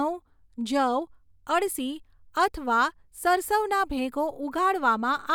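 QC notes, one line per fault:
No technical faults are audible in this speech recording; there are no interruptions or disturbances anywhere in the clip.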